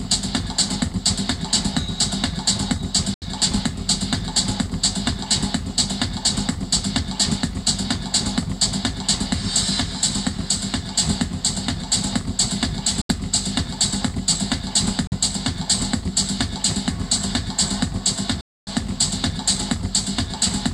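At 3.14 s, 13.01 s, 15.07 s and 18.41 s the sound cuts to silence and then picks up further along, as if it had kept playing through the gap. The holes last about 0.12 s, 0.10 s, 0.06 s and 0.29 s. The likely cause is a Bluetooth dropout, where packets reached the headphones too late and were discarded. A waveform shows flat, abruptly edged gaps, and a spectrogram shows blank vertical bands across all frequencies.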